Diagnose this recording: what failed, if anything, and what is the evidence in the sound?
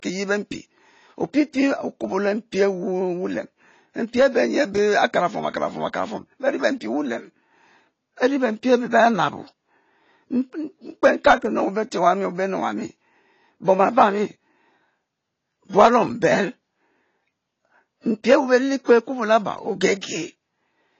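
The failure sits at the codec stage. Across the whole speech recording the top end is gone, with nothing above 8 kHz, and the damage is plainly audible: dull, smeared consonants and a warbling texture on sustained sounds. That points to AAC compression, likely AAC-LC at a low bitrate around 24 kbps. A fixed lowpass filter would also remove the highs, but it would leave the remaining band clean rather than smeared and watery.

There is pre-echo from 18.84 to 18.89 s, a hiss about 45 ms long just before a sharp attack. The codec spreads quantisation noise across the whole transform block, so noise sized for the loud onset also fills the quiet stretch ahead of it. Because the hiss comes before the transient and not after it, this cannot be reverb or a decaying tail.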